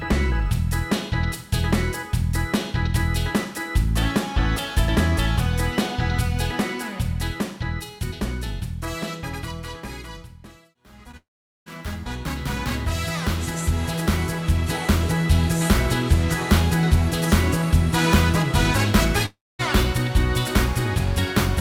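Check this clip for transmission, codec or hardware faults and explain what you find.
Three transmission faults are audible, all from lost network audio: one brief concealed gap and two longer dropouts.

At 11.11 to 11.15 s there is a short concealed packet loss. About 20 ms of audio never arrived, and the receiver covered roughly 15 ms of it by extending the preceding sound before blending back in. It comes across as a quick smear or wobble rather than a hole. Unlike a dropout, it leaves no silence of its own, though a dropout begins only about 20 ms later.

From 11.17 to 11.68 s, and again from 19.26 to 19.61 s, the audio cuts out for about half a second and about a third of a second. The cause is likely a long network dropout. In each case the last sound is stretched into a fading buzz or hiss, and then dead air fills most of the gap: about 420 ms in the first and about 240 ms in the second. 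When the audio returns, the missing stretch is simply gone. That silence and the skipped material separate these from the brief smear at 11.11 s.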